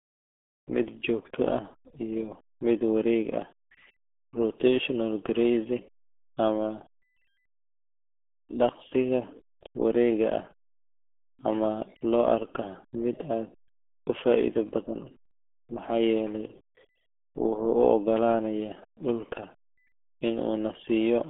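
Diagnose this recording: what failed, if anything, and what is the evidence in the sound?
The failure is at the codec stage: the RealAudio 14.4 codec, throughout. The speech sounds muffled and gargly. Nothing survives above about 3.7 kHz, and the band sits near 250 Hz to 3.4 kHz. This heavy damage fits an 8 kbit/s dial-up speech coder.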